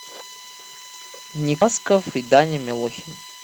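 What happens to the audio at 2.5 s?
At 2.5 s the speech is inside a jitter buffer speed-up running from 1.79 s to 3.43 s. The receiver drains surplus buffered audio by cutting pitch-period slices, roughly 150 ms in total, so the speech plays about 110% fast at unchanged pitch and sounds hurried.

USB whine also sits under that moment and the whole clip. Current drawn in the bus's 1 ms frames leaks through power or ground as a fixed 1 kHz tone, strongest at 4 kHz, about 25 dB below the speech.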